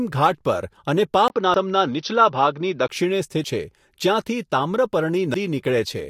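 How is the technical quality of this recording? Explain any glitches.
The recording has two distinct faults: a stretch of duller sound and three short skips.

Input switched to a poorer device, 1.28 to 2.89 s: the likely cause is a change to a narrower-band input. After a 20 ms gap, the speech loses everything above 6.1 kHz and sounds duller, with a faint new noise floor and its level unchanged, until the fuller sound returns.

Audio missing between chunks, at 1.54, 3.44 and 5.34 s: audio is likely being dropped at chunk boundaries every 2 s. Roughly a tenth of a second vanishes each time, and the speech is joined abruptly across the skip.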